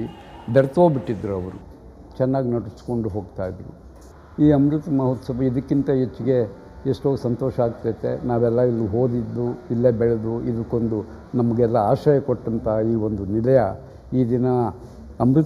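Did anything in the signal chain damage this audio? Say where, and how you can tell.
Yes. From 1.61 s to the end at 15.45 s the sound turns hollow and phasey. This is channel delay (comb filtering). One channel lags by roughly a fifth of a millisecond before the mono sum. Common content cancels, leaving fixed notches starting around 3 kHz.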